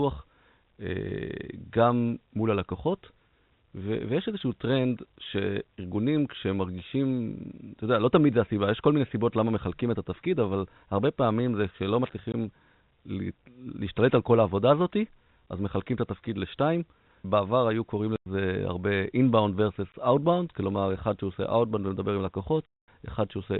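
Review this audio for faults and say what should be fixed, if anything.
The speech has four holes from packet loss filled with silence, at 12.32 to 12.34 s, 18.16 to 18.26 s, 19.92 to 19.94 s and 22.66 to 22.88 s. The gaps are 20, 100, 20 and 220 ms, all multiples of 20 ms, which fits lost 20 ms packets on this G.711 telephone path. The receiver drops in hard-edged silence. Adding a jitter buffer with packet loss concealment, plus a look at the network path, would fix it.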